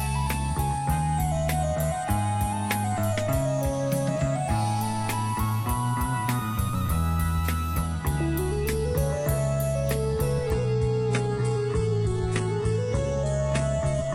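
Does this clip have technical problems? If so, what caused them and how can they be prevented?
Yes. From 10.5 s to the end, the clip suffers an adaptive stream at a lower bitrate. The quality drops suddenly, with no gap. Nothing remains above 11 kHz. Codec artefacts rise. This happens when the connection slows and the player switches to a cheaper version of the stream. The sound points to a change from about 96 kbit/s AAC to a 12 kbit/s HE-AAC stream. To prevent it, give the stream a steadier, faster connection or a larger playback buffer, or set a higher minimum bitrate.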